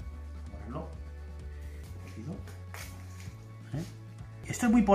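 Damaged data in a compressed stream at 1.84 s and again at 4.44 s: corrupted bytes in the encoded file throw the decoder out of step, so it misreads or drops frames while hunting for the next valid header, leaving a brief glitch such as a chirp, squawk, click or short hole each time.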